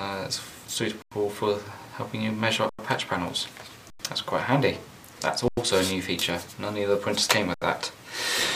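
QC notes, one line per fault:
1.02–1.12, 2.69–2.79, 3.90–3.99, 5.48–5.57 and 7.54–7.62 s, underrun with held sample: the sound freezes flat for 93 ms (74 ms last), with soft edges. The output buffer emptied, the converter held its last value, and playback resumed where it stopped. The 93 ms gaps fit a 4096-sample buffer.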